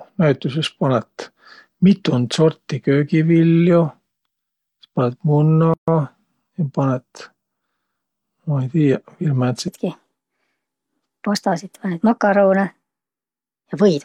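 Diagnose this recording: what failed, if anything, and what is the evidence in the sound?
At the codec stage, separately encoded pieces were joined without trimming encoder delay and last-frame padding, leaving a gap at a join of encoded pieces. The speech stops from 5.74 to 5.88 s, a gap of about 140 ms with smeared edges, then resumes mid-flow.

From 9.68 s to the end, the speech runs 1.33 times too fast, its pitch raised by roughly five semitones, with speed and pitch changing together at once. This section at the wrong speed likely comes from playback or editing against the wrong clock.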